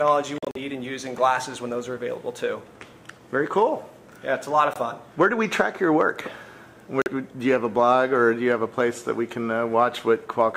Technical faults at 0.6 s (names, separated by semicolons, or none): Bluetooth dropout